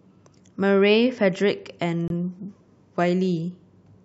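At 2.08 s a corrupt frame is muted: damaged compressed data was rejected and replaced by a 52 ms abrupt silent gap, consistent with two frames, showing as a flat waveform and blank spectrogram column.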